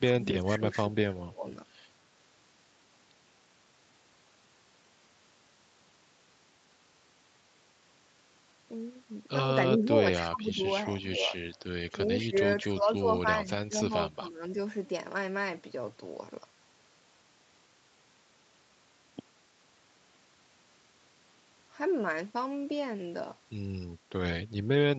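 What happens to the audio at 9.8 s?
From 9.75 to 11.34 s the talker's speech dips and breaks up, dropping by up to about 15 dB for roughly a second in total. This is speech suppressed in double talk, likely an echo canceller mistaking the talker for loudspeaker echo while the far side spoke.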